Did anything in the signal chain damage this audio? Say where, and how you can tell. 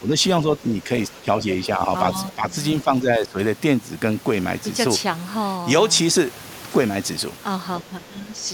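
Yes. At the call-processing stage, speech is suppressed in double talk: dips of about 5 to 15 dB at 0.0, 0.43, 1.2, 2.3, 2.84 and 7.81 s, likely from an echo canceller turning down overlapping talk.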